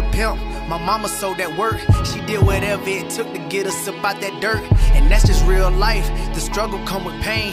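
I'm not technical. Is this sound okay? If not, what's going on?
Yes, it sounds fine, with nothing going wrong anywhere in it, so there's nothing here to worry about.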